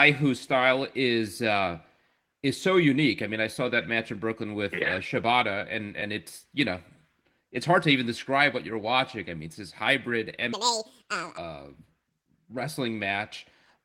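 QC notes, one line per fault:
10.53–11.37 s, section at the wrong speed: this stretch was likely played back against the wrong clock, running at 1.92 times its recorded rate, so under a second of speech gets squeezed through far too quickly. Because speed and pitch move together, the speech jumps up by roughly ten semitones and turns squeaky and hurried for that span, then drops straight back to its normal pace and pitch once the section ends.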